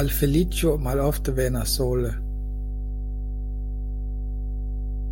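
Mains hum runs through the whole speech clip. It is a steady low tone at 50 Hz with a few low harmonics. Power-line current has leaked into the signal, likely through a ground loop or a nearby transformer. The hum sits only slightly below the speech level.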